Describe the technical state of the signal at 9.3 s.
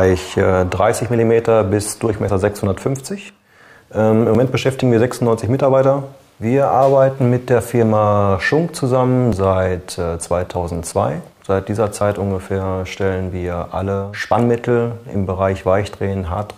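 At 9.33 s there is an overlap between stream segments: the player trims a few milliseconds it wrongly treats as duplicated, so the waveform jumps, producing a tiny skip.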